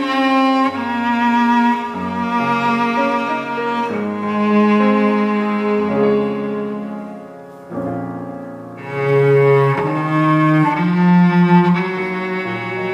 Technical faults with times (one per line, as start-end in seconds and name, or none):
none